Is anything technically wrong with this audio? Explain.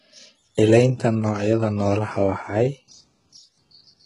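Yes. Throughout, the speech shows heavy damage, likely from HE-AAC compression at a rate fitting about 12 kbps. Only the low spectrum is truly coded. The treble is copied upward from lower bands, so s sounds turn gritty and metallic, and nothing reaches above 11 kHz.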